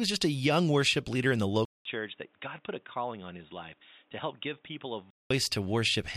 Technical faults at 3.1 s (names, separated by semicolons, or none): input switched to a poorer device